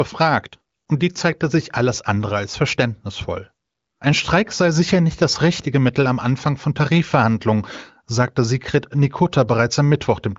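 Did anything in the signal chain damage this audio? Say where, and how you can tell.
No, nothing in the signal chain damaged this audio.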